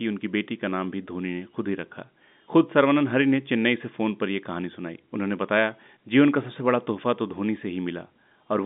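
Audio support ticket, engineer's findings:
Engineer's findings: no fault found in this speech clip, which carries the normal G.711 telephone band with nothing above about 3.8 kHz.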